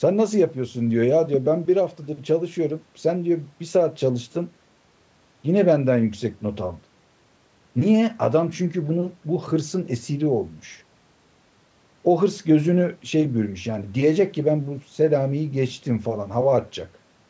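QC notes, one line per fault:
Nothing stood out on listening to the speech; the call microphone processing trims the lowest bass as expected, and nothing above 8 kHz is heard.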